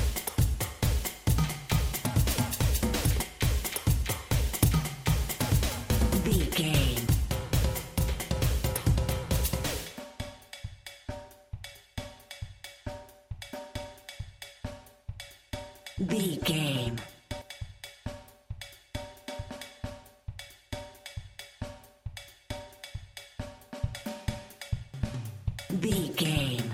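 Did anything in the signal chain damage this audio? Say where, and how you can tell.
Yes. At the codec, compressed frames were skipped at 3.19, 4.62, 5.71 and 7.07 s. Roughly 70 to 150 ms of 10 ms frames vanish.

At 6.32, 17.42 and 24.94 s the sound jumps ahead by about 50, 150 and 150 ms, likely a dropped buffer (overrun) in the driver.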